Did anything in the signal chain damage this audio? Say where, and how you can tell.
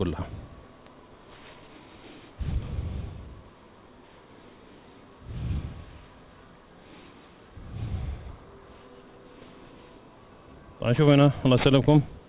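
Yes: aliasing throughout, from sample-rate conversion. Content folds back below 4 kHz at roughly a tenth the signal level, pointing to an unfiltered downsample to 8 kHz.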